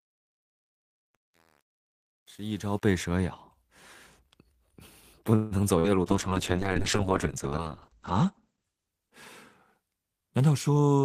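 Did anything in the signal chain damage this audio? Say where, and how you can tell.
Yes. The first damage is truncation distortion on a fade, at the sample-format or gain stage. The clip fades in smoothly over its first 2.93 s, but from 0.0 to about 2.77 s the low-level speech is gritty. Undithered requantisation makes the quietest part of a fade collapse into a few coarse steps, and the coarseness here fits a word length of about 8 bits. The grit clears as the level rises toward 2.93 s.

From 5.35 to 5.54 s there is a call audio freeze in the network path. For about 157 ms the last sound is carried on as a fading continuation and never reaches silence. The speech then resumes exactly where it stopped, with nothing missing, so the gap was inserted rather than cut out. That points to a jitter buffer running dry while packets were likely held up in transit, with playback delay growing by the length of the stall.

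A burst of packet loss follows at 5.79 to 5.87 s. About 51 ms is filled with a held, fading continuation of the previous sound, and the speech then picks up about 40 ms further on than where it stopped, so that stretch is gone. Concealment extended and attenuated the last audio across packets that were lost or arrived too late for playback.

From 6.08 to 9.98 s there is a call bitrate drop at the codec. The speech turns rough and watery, and the top end closes in: bandwidth falls from about 20 kHz to about 8 kHz. This fits the encoder being pushed from roughly 32 kbps down to 8 kbps after the bandwidth estimate fell. The worst quality holds for about 1.8 s before the bitrate and clarity recover near 9.98 s.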